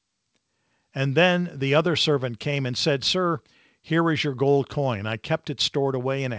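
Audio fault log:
No faults heard in this speech recording.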